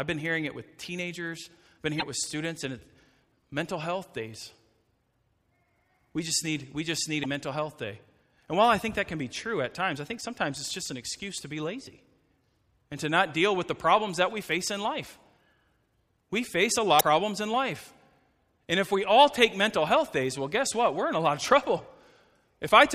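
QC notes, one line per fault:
1.97–2.03 s, 7.20–7.26 s, 16.97–17.02 s: damaged data in a compressed stream. Each is a brief disturbance in the speech. Corrupt frames break decoder sync until the next header.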